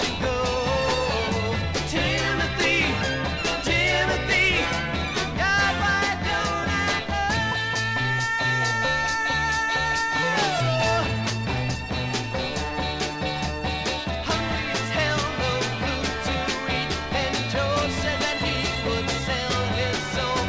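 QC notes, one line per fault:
No technical faults are audible at any point in the signal.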